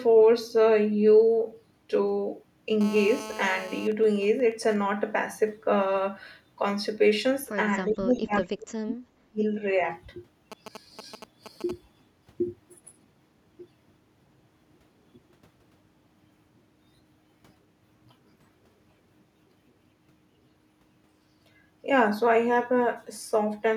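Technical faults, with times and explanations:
2.81–3.88 s, GSM phone buzz: a hard, raspy buzz about 15 dB below the speech, pulsing at 216.7 Hz. It comes from a nearby 2G phone in a call whose radio bursts are rectified by the audio circuitry. On a spectrogram it shows as a steady ladder of harmonics spaced 217 Hz apart, and the waveform carries a fine, regular comb of spikes.
3.92–4.76 s and 10.52–11.71 s, GSM signalling bursts: the first run is even ticks with a longer 217 Hz buzz twice a second, and the second is galloping dit-dit-dit groups of short 217 Hz buzzes. The first run is faint, about 25 dB down, from a phone in a call with its user silent. The second is louder, about 15 dB down, from the phone signalling. A spectrogram shows short, separated clusters of vertical harmonic stripes.
7.88–7.92 s, echo leak: a brief, faint scrap of voice, about 35 dB below the speech, arriving 406 ms after its original. 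It is likely residual loudspeaker echo that the far end's canceller failed to remove. It appears as a tiny, smeared repeat of earlier spectral shapes.
7.90–9.01 s and 9.24–9.43 s, speech suppressed in double talk: the talker's level dips by roughly 30 dB, then about 35 dB, for about a second and then a fifth of a second. Both sides were likely talking at once, so the echo canceller attenuated everything. The waveform envelope sags sharply, and the spectrogram fades.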